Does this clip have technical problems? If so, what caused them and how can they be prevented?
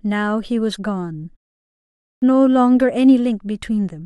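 Yes: a clipped start after a pause at 1.68 to 2.22 s. After a 0.4 s silence, the output device slept and woke late, swallowing about 0.54 s of speech onset. Keeping the output stream active through silences prevents this.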